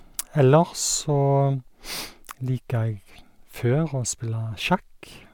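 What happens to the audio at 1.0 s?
Nothing goes wrong at 1.0 s; the speech there plays through intact, with no dropout, click or distortion.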